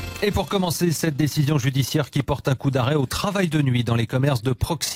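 From start to finish the audio carries overlap-add ripple: frames were windowed and rejoined with an overlap that fails to sum flat, so level dips about 6 dB around thirty times a second. It sounds like rough, fast flutter; the waveform envelope shows regular scalloping, the spectrogram vertical banding.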